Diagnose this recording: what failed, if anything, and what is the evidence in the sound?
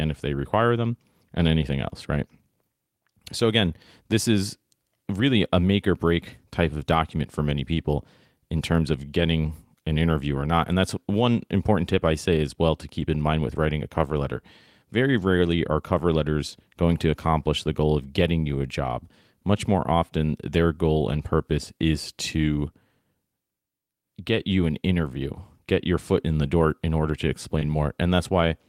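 Short concealed packet loss on the network at 27.59 to 27.63 s, after "door in order to": the decoder stretched the preceding sound across the gap, leaving a brief smear.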